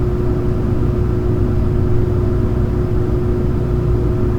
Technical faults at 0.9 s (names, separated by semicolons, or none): none